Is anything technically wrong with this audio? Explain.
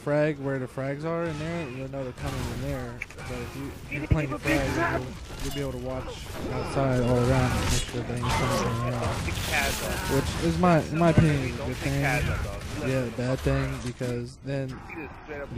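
Yes. At 7.11 s the stream likely lost a fraction of a millisecond of samples, dropped samples, so the waveform jumps abruptly, producing one sharp, brief click.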